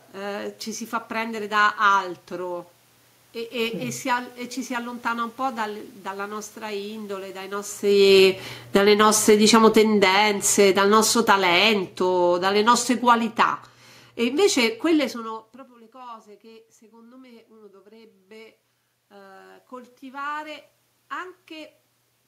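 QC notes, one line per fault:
7.85–8.98 s, automatic gain falling: shortly after the talker moves, the level sinks by about 10 dB over a second. The room noise drops with the voice, which shows it is the gain control pulling back, not the talker.
8.89–9.57 s, automatic gain rising: the control lifts back by about 5 dB in under a second. Voice and background swell together, so this is not the talker leaning in.
9.5–13.64 s, automatic gain falling: a slower pull-down of about 10 dB over four seconds. The room noise sinks in step with the voice, which rules out a talker moving away.
10.16–11.86 s, automatic gain rising: a brief lift of about 3 dB within that longer descent, audible as a small swell of the room noise as well as the voice.
15.92–21.78 s, automatic gain rising: after the talker moves back near 15 s, the voice arrives about 22 dB quieter. The control climbs about 9 dB over nearly six seconds, and the background noise rises along with it.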